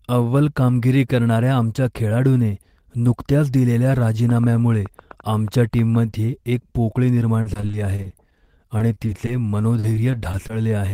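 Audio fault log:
4.30–5.96 s, train of clicks: for about 1.7 s a series of sharp, similar-shaped pulses ticks over the speech at roughly 7 per second, unevenly spaced, around fifteen in all. The peaks reach about the level of the speech itself. The irregular pacing and repeated pulse shape point to a likely cause in electrical interference or a faulty connection or power supply injecting transients into the path.
7.41–9.29 s and 9.79–10.51 s, repeated packet loss (robotic sound): in both stretches the speech turns choppy as short holes occur one after another, about fifteen in the first run and five in the second, each up to 40 ms long. About 16 to 17 percent of each span is concealed by extending the preceding sound, roughly 310 ms and 120 ms of fill respectively, and further segments of about 220 ms and 120 ms are simply missing. The repeated patching of the last sound gives the choppy quality.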